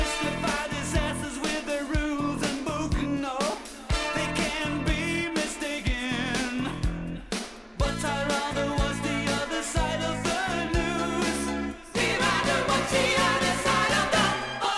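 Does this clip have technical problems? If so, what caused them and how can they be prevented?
No, I hear no technical problems anywhere in this clip.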